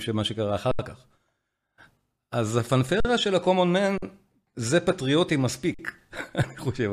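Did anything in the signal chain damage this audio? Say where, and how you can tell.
Yes. The damage is at the driver or buffer stage: an underrun with held sample, four times. The speech freezes at 0.71 to 0.79 s (76 ms), then at 3.00 to 3.05 s, 3.98 to 4.02 s and 5.74 to 5.79 s (46 ms each). The output buffer ran dry, and the converter held its last value. The sound stops with no sharp click, then resumes where it left off with no speech lost. The repeated 46 ms gaps fit a 2048-sample buffer.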